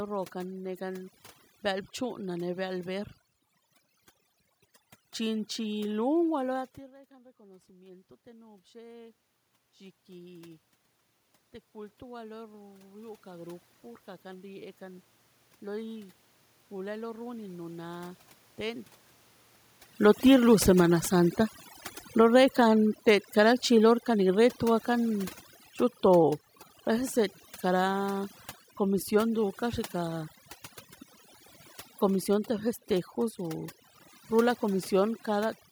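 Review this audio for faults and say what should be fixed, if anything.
Overdone noise removal runs through the whole clip. The noise reducer is set so hard that it cuts any frequency band close to its noise estimate, along with quiet speech detail. The room noise drops and breaks up into twinkling specks.

Automatic gain rising occurs from 7.08 to 22.75 s. After the talker moves at about 6.5 s, the input falls by about 21 dB. The gain control climbs about 16 dB to compensate, so voice and background swell together slowly over many seconds.

Automatic gain falling overlaps it from 19.9 to 29.49 s. When the talker moves again near 19.5 s, the raised gain makes the input too loud, and the control backs off by about 12 dB. The sound starts loud and then sinks along with its background.

To prevent this, lower the noise reduction strength so quiet speech survives, and give the gain control faster attack and release, or narrow its range, so it tracks changes in talker distance without long swells and sags.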